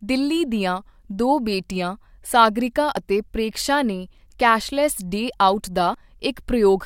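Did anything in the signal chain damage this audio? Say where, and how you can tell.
Yes. Audio missing between chunks at 2.97 s and 5.94 s: the speech jumps abruptly forward, losing a few tens of milliseconds with no silence. The regular 3 s spacing likely points to the recorder's buffering, which drops a sliver whenever one chunk closes and the next opens.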